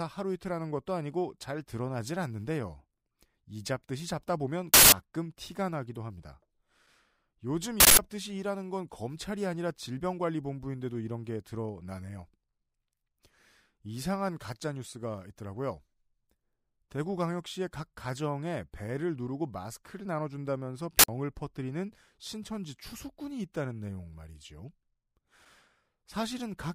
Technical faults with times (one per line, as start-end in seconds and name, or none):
4.74-4.92 uninitialised buffer
7.80-7.99 uninitialised buffer
20.99-21.08 uninitialised buffer